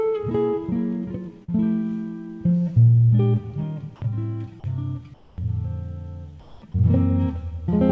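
At 1.44 s there's a short concealed packet loss. About 40 ms of the stream didn't reach the decoder in time, so the receiver patched the hole by extending the last bit of sound and then blended back into the real signal at about 1.50 s. What you hear is a quick smear or wobble rather than a clean dropout.

Later, from 5.14 to 5.38 s and again from 6.40 to 6.62 s, the background turns into a flat, featureless hiss. That's comfort noise in place of the background, likely from the sender's discontinuous transmission cutting out during the pauses, with the receiver generating synthetic noise in the gaps. The real background sits around 26 to 27 dB below the loud parts. The substitute is about 10 dB quieter in the first gap and about 4 dB quieter in the second, so the room tone dips and loses its texture for roughly a quarter of a second each time. Throughout, the call path leaves nothing above 8 kHz, which fits a wideband codec like G.722.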